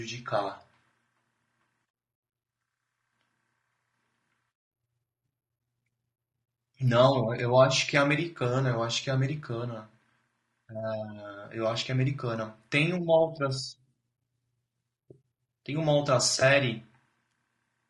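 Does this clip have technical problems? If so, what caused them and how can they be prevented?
Yes. Throughout the speech there is rough, grainy coloration, likely from low-delay AAC compression at a rate that fits about 32 kbps. Its short frames resolve voice harmonics poorly. A spectrogram shows noise filling the gaps between harmonic lines and a blurred, synthetic-looking upper band. Raising the bitrate or using a longer-frame codec would prevent it.

At 16.39 to 16.42 s there is a brief smeared, noisy patch from AAC frame loss with concealment, consistent with one lost frame of about 20 ms. The decoder filled the gap from the preceding spectrum. On a spectrogram this appears as a thin vertical smudge of smeared energy, and the waveform shows a short, irregular stretch. Forward error correction or a more reliable network path would prevent it.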